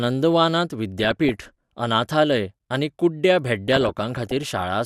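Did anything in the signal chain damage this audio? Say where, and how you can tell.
Yes: DAB burbling at 0.98–1.45 s, before "अनाथालय आनी कुड्ड्या", and 3.68–4.65 s, after it. Weak-reception bit errors corrupted MP2 audio data, producing short noise blips in single sub-bands.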